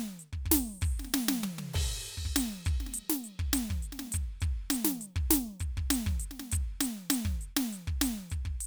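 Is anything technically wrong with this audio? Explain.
No, nothing technically wrong stands out here; the music just rolls along without any dropouts, glitches or other problems catching the ear.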